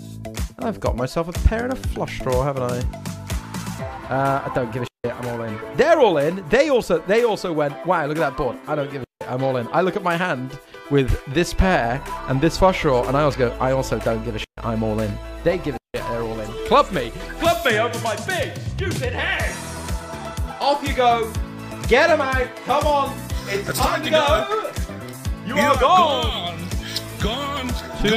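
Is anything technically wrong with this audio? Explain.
No, nothing technically wrong can be heard here.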